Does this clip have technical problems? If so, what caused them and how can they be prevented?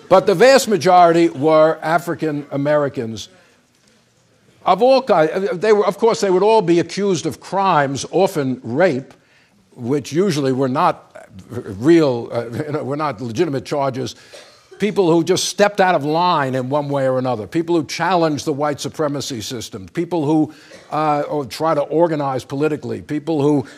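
Yes. From 5.54 to 9.13 s there is a Bluetooth SBC bit pool drop. The wireless link became congested, so the sender cut the SBC bit pool to keep the stream alive, and the degradation fits a fall from 31 to about 14, near 99 kbps. With so few bits the highest sub-bands are starved and the rest are quantised coarsely, so the treble goes dull and a gritty noise rides on the sound until the rate recovers. To prevent it, reduce radio congestion by keeping the devices close, clearing 2.4 GHz interference and fewer simultaneous Bluetooth connections, or use a codec and link that hold a steadier bitrate.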